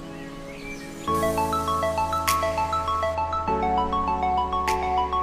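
From 1.15 to 3.15 s, pre-emphasis is left on: the treble lift matching a 50 µs FM curve goes out without its de-emphasis cut, leaving 10 kHz about 11 dB above 1 kHz. That stretch turns thin, glassy and harshly bright, with hiss-like edges exaggerated.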